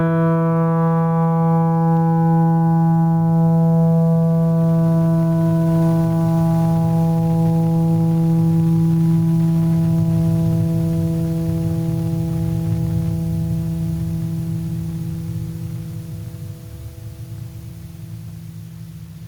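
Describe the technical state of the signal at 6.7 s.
At 6.7 s the music shows gain pumping, present throughout. Level swings roughly 15 dB, likely from excessive gain hitting a fast limiter. Loud and soft parts sit closer in level, and the sound is squashed.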